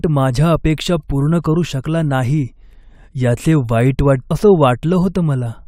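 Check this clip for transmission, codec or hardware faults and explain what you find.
One fault: a stream segment skipped at 4.30 s, just after "याचे वाईट". The speech jumps abruptly ahead with a small blip, likely because one segment failed to load and playback continued from the next.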